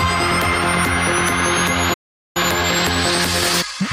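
At 1.93 s the audio cuts out in mid-flow and stays silent until 2.37 s, a gap of about 416 ms. This is a playback stall, likely caused by the player running short of data or its output thread being held up. On a waveform it appears as a flat line cut abruptly into ongoing signal; on a spectrogram it is a clean vertical band of empty time across all frequencies, with no fade on either side.

When the sound returns at 2.37 s, time-compressed catch-up begins and runs to the end of the clip. The player is working off its backlog by removing short slices and cross-fading the seams, so everything moves at about 1.15 times normal speed while the pitch stays put. The result sounds hurried. A spectrogram shows the harmonic lines at their usual heights while events arrive closer together than before the gap.

At 2.84 s there is a compressed frames skipped fault: roughly one frame, about 20 ms of audio given 23.2 ms frames, never reaches the output, so the sound jumps forward slightly. 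On a spectrogram it shows as a slight discontinuity in the harmonic traces, and the waveform shows a small jump in shape.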